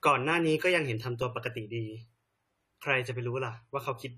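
A short speech recording carries plainly audible AAC compression damage from start to finish. Nothing reaches above about 14.1 kHz, so the top end sounds dull and closed in. Sibilants and held sounds take on a fizzy, warbling texture. The likely cause is lossy AAC-LC coding at a low bitrate, roughly what 32 kbps would give. The encoder lowered its cut-off and thinned or filled in parts of the spectrum to save bits, which smears the detail.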